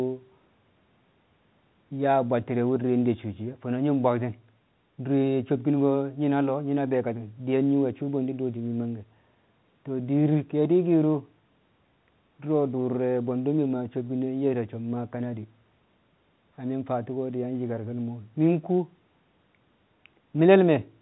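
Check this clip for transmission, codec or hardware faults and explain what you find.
Nothing stood out on listening to this speech clip; it comes across as an ordinary call recording carried over telephone coding.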